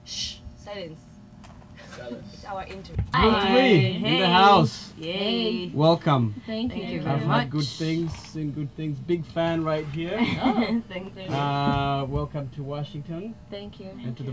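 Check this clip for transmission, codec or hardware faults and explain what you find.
The signal arrives intact, with no audible disturbance at any point.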